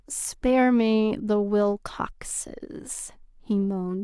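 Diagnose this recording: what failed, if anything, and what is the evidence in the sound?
Nothing failed; no fault can be heard anywhere.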